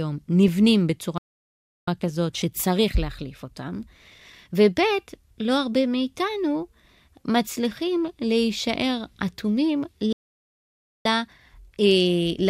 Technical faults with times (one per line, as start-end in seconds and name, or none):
1.18-1.88 playback stall
1.88-4.88 time-compressed catch-up
10.13-11.05 playback stall
11.05-12.50 time-compressed catch-up